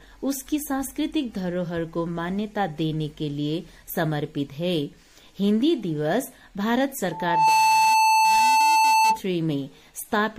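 Loudspeaker feedback squeal from 7.11 to 9.20 s: the microphone re-amplifies its own loudspeaker, so an 882 Hz tone swells within about 0.4 seconds to roughly 5 dB above the sound.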